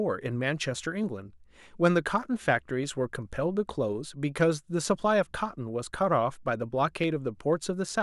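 Speech, with a regular click from 0.44 s to 7.64 s, repeating every 0.6 s. That steady tick is the classic clock drift buffer slip, likely from two clocks disagreeing by a few hundred ppm, so the buffer periodically drops or repeats a handful of samples.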